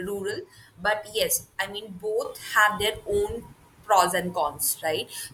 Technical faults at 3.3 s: sudden gain jump

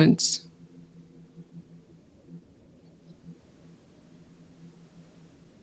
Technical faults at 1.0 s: none

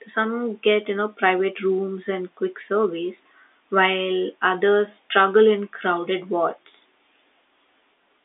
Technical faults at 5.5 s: none

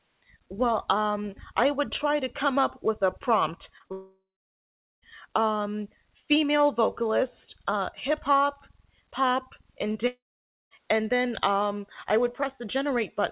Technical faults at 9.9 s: short concealed packet loss

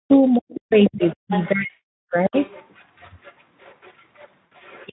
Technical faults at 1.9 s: speech suppressed in double talk; VoIP packet loss concealed by the speech codec

